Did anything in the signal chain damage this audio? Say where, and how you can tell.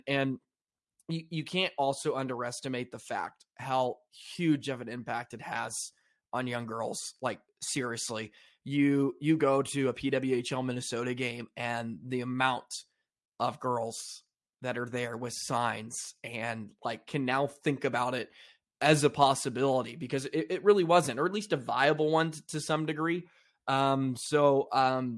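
No, nothing in this speech recording stood out on listening as damage from any stage of the signal chain.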